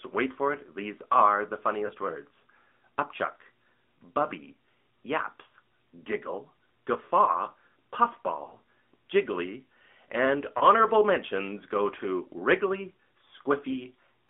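From the start the whole clip runs through the AMR narrowband mobile codec. Everything sits between about 200 Hz and 3.6 kHz, and the voice comes out plainly buzzy and a bit synthetic. That's the vocal-tract model rebuilding speech from a few pulses, which fits the 10.2 kbps mode.

Then there are lost AMR speech frames. Single frames go at 1.86 s, around 5.48 s and 10.58 s, where the decoder fills the gap with the last good settings and you get a brief dip or warble. From 8.44 to 8.60 s four frames drop in a scattered cluster. The longest run is 40 ms, so the sound drags and sags before recovering a little rough.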